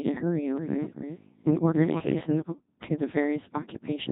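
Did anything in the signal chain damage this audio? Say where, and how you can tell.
Yes. The damage comes from the codec stage: a Codec 2 vocoder, heavily applied across the whole speech clip. The voice sounds robotic and buzzy from start to finish. The original waveform is gone. Only pitch, voicing, energy and a coarse spectral envelope survive, rebuilt from sine waves. The sound fits a very low rate of about 2.4 kbit/s.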